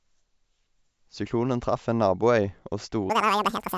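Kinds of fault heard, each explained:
Wrong sample rate: audio recorded at 16 kHz plays back at 32 kHz unconverted, so the last stretch of speech runs twice as fast and an octave higher.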